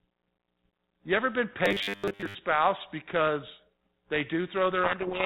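Right after "ever been", from about 1.66 to 2.35 s, the speech goes robotic, a rigid metallic buzz at 100 Hz that only loosely tracks the words until "because they". That's likely repeated short buffers: a 10 ms chunk looped while most of the real audio gets skipped.

Then from 4.84 s to the end at 5.26 s there's a codec payload misread. The 32 kbit/s G.726 stream gets decoded with its code words in the wrong bit order, so the speech is buried under harsh, grinding distortion.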